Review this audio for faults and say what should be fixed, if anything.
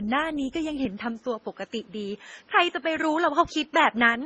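Transcoding between lossy codecs runs throughout the speech. Nothing survives above 11.8 kHz, and two different artefact textures sit together, likely an MP3 encode re-encoded to Opus. A single low-bitrate encode would show only one kind of smearing. Prevent it by encoding once, from the original uncompressed source.

From 0.85 s to the end, the input is switched to a poorer device. The band narrows to 7.6 kHz, with no gap and no level jump. A faint new noise floor, around 40 dB down, likely comes from a different microphone. A codec change would narrow the band without adding fresh background noise. Prevent it by locking the input device and disabling automatic headset profile switching during recording.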